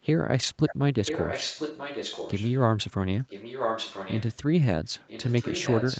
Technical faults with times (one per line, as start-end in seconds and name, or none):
0.67-0.75 echo leak
1.05-2.55 echo leak
3.28-4.37 echo leak
4.99-6.00 echo leak